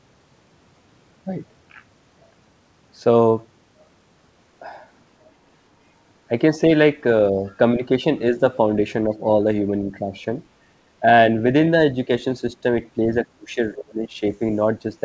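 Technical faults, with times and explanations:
7.32–7.44 s, speech suppressed in double talk: a quick dip of about 5 dB that barely lasts a tenth of a second before the level comes back. Both ends were most likely talking at once, and the echo canceller couldn't tell this talker from loudspeaker echo, so it pulled everything down briefly.
13.24–14.23 s, speech suppressed in double talk: much harder this time. The sound drops by as much as about 30 dB across roughly 0.7 s of that stretch. The likely cause is the same overlap, with the canceller clamping down harder and longer.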